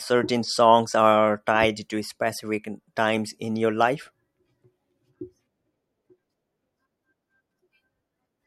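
No technical faults are audible.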